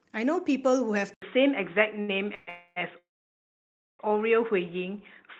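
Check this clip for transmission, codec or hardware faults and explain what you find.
Three kinds of fault are audible in this speech: a drop in input quality at 1.14 s, one brief stall, and three call-audio freezes between 2.35 and 4.01 s. The call path itself, with its band reaching to about 12 kHz early on, fits Opus at around 20 kbps.

Input switched to a poorer device, from 1.14 s to the end. After an 80 ms silence, the sound turns dull, with nothing above 3.8 kHz, a level shift of about 5 dB and a new noise floor roughly 55 dB down. This is likely a change of microphone or headset profile.

Short stall from a late packet, 2.01 to 2.25 s. A packet arrived late and the jitter buffer ran dry, so the receiver stretched the preceding sound by about 68 ms and then resumed. Nothing is lost, but one sound is held audibly too long.

Call audio freeze at 2.35 to 2.49 s, 2.49 to 2.78 s and 2.98 to 4.01 s. 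The likely cause is packets held up in transit, draining the buffer. The first two freezes fill 126 ms and 270 ms with fading continuation. The third inserts 1010 ms, of which 950 ms is silence, before playback resumes intact.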